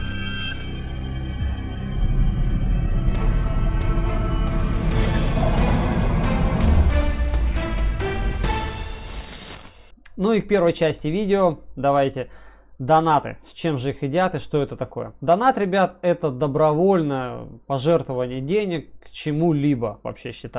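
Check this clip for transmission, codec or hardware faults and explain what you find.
Nothing stood out on listening to this recording.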